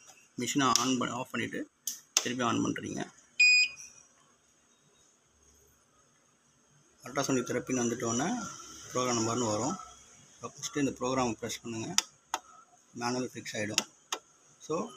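No technical faults are audible anywhere in the audio.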